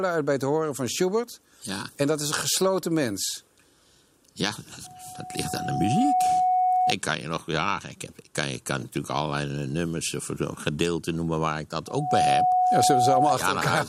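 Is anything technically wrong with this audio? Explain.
Yes. There is loudspeaker feedback squeal, from 4.84 to 6.95 s and again from 11.87 to 13.36 s. A microphone is picking up the loudspeaker it drives, and at 736 Hz the loop gain climbs past one, so that frequency feeds itself. The result is a pure tone that swells, slowly over about a second and a half the first time and almost instantly the second, until it sits roughly 5 dB above the sound.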